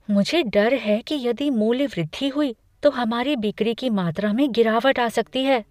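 Nothing in this speech recording stands out as a technical fault; it just runs along without any glitch to point to.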